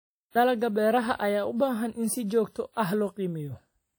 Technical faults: WMA compression

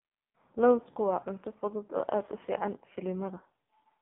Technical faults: AMR narrowband mobile codec

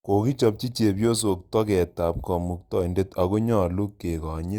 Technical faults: sample clock jitter

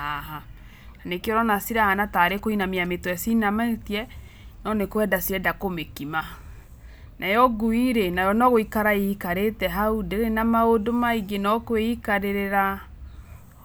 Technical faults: GSM signalling bursts

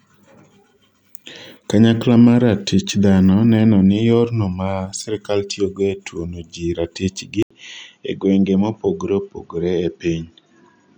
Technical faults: input switched to a poorer device

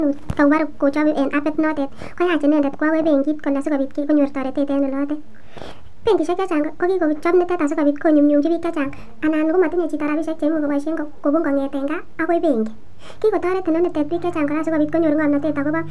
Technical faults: wrong sample rate

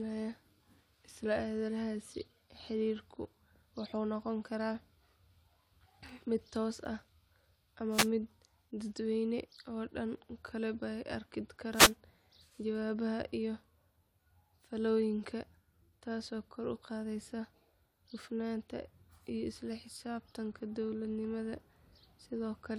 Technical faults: wireless microphone noise hit

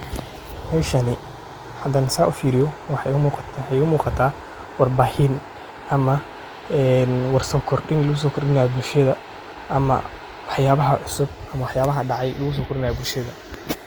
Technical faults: Opus compression

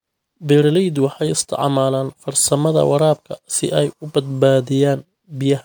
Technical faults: generation loss

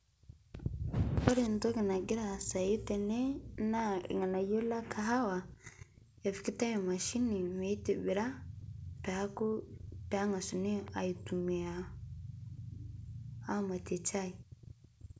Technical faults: loud pop

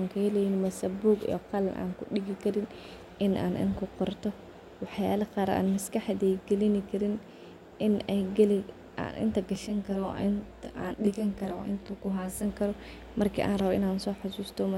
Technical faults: channel delay (comb filtering)

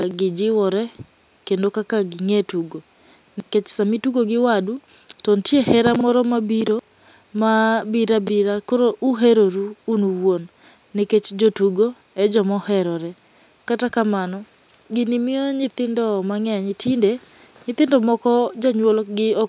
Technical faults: none

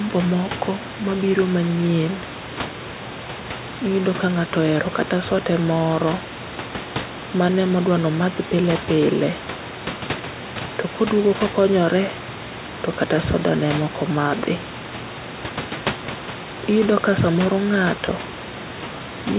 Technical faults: none

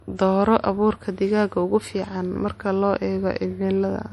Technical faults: low-bitrate audio saved at a high bitrate

